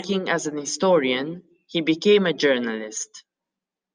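No technical faults can be heard anywhere in the speech.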